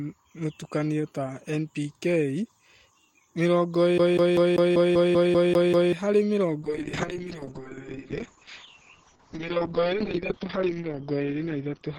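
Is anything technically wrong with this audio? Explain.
Yes, there are two faults. From 3.98 to 5.93 s the speech stutters rapidly, with a short slice of about 0.19 s repeating ten times, each separated by a brief mute. This is a CD stuck on one turn: a scratch kicks the laser back one track at the same point on every rotation, so the same fragment keeps replaying.

From 6.63 s to the end the speech turns rough and muffled, with the top end gone above 6 kHz where it previously reached 20 kHz. It stays at its worst for about 4.4 s. This is a call bitrate drop: the bandwidth estimate collapsed, which fits the encoder falling from around 32 kbps to 7 kbps. It then coded the signal coarsely and discarded the high frequencies.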